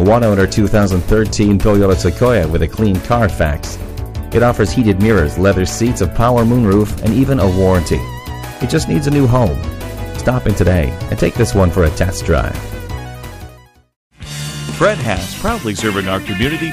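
Hard clipping runs through the whole clip. The signal is driven about 7 dB past what one stage can pass, so the loudest peaks are sliced flat, though only a small share of the waveform, around one or two percent, actually hits the ceiling. The flat tops throw off high harmonics, heard as a brittle crackle on the peaks. Soft saturation would round the peaks into a warmer thickening; this edge is abrupt and gritty.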